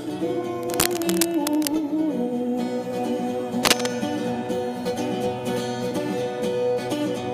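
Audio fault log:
0.63–1.69 s and 3.65–3.88 s, cable scratch noise: dense, uneven bursts of scratchy rustle sit over the sound, roughly 5 dB under it in the first stretch and roughly 5 dB above it in the shorter second one. The likely cause is a worn cable, connector or control whose contact resistance jumps around as it's moved.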